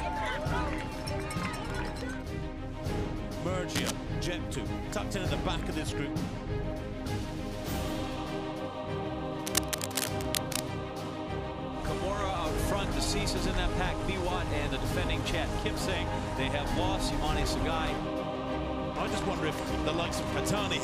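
Two bursts of cable scratch noise sit on top of the audio: a short one from 3.75 to 3.91 s, and a longer patch from 9.44 to 10.60 s that runs for over a second. Both are dense, ragged scratching and rustling, nearly as loud as the sound itself. The likely cause is a worn cable, connector or control being moved, so its contact resistance jumps around and sprays irregular noise into the signal.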